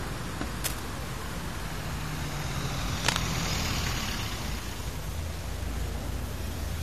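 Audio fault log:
throughout: low bit depth without dither. The signal was likely truncated to about 6 bits with no dither, so the rounding error follows the sound as grainy distortion only about 15 dB below it.
0.64–0.80 s and 2.92–3.20 s: cable scratch noise. A worn cable or connector was likely disturbed, and its contact resistance jumped rapidly. This adds dense, uneven scratchy bursts, the first slightly below the signal and the second about equally loud.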